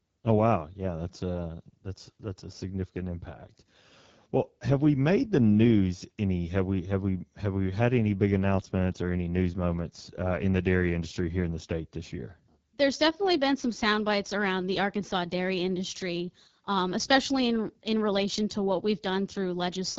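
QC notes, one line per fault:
throughout AMR wideband (HD Voice) codec: the speech sounds plainly rough and raspy, with a hissy, noise-like top end. A pulse-driven vocal tract model codes it only up to 6.4 kHz and fills above with shaped noise. The plain roughness fits the low 8.85 kbit/s mode.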